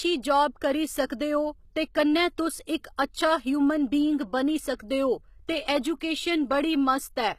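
From start to finish, the speech has been through what is likely HE-AAC compression at a very low bitrate, consistent with about 20 kbps. The encoder keeps only the lower spectrum and rebuilds the treble by copying lower bands upward under a coarse envelope, so the upper harmonics no longer line up with the real ones. Sibilants come out gritty and metallic, the codec damage is plainly audible, and nothing remains above 14.9 kHz.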